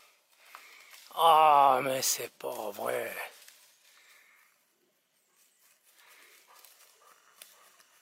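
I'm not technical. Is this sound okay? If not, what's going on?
Yes, this sound is okay, and nothing is going wrong with it.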